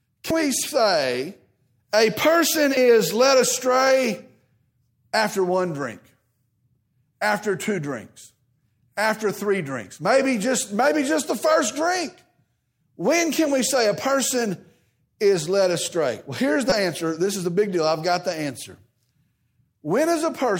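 Speech, with damaged data in the compressed stream at two points. Corrupted bytes make the decoder misread frames and lose sync while it hunts for the next frame header, giving a brief blip at 0.30 s, just before "we say a person", and again from 16.70 to 16.72 s.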